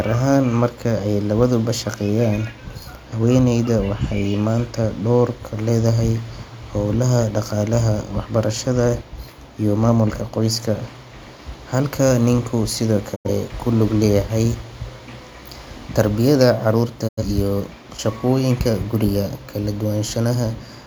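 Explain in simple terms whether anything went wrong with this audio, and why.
At 13.14 to 13.30 s, just before "kulug leyahay", and at 17.07 to 17.22 s, before "iyo shaqoyinka guriga", the speech fades to silence within about 20 ms. This is a digital broadcast dropout: about 85 ms is lost each time, fitting two failed frames. Unlike internet glitches, nothing is patched in; the gap stays silent.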